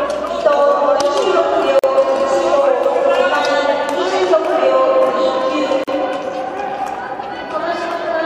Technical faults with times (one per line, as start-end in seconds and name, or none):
1.79-1.84 gap at a join of encoded pieces
5.84-5.88 gap at a join of encoded pieces